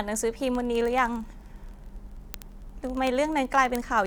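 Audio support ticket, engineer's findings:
Word clock ticks, 0.12–4.06 s: steady ticks roughly every 30 ms, uneven strength. Unlocked receiver clock slipping one sample. Spectrogram shows evenly spaced thin vertical lines.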